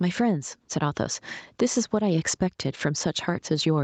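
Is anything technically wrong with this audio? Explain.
Yes. Gain pumping runs through the whole speech clip. The gain swings by around 10 dB, ducking as each loud syllable arrives, so levels sound squashed and breathing. The likely cause is input gain set far too high, with a fast limiter repeatedly pulling it back down. On a waveform the envelope looks flattened, with noise rising between peaks. A spectrogram shows the noise floor brightening in gaps and darkening under speech. Nothing appears above 8 kHz, consistent with a wideband Opus call path.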